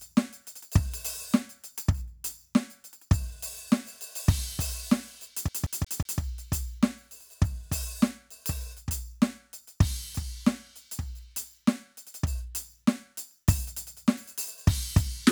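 A CD stuck on one turn hits this music from 5.48 to 6.21 s, where a 0.18 s slice repeats four times as the laser jumps back over a scratch.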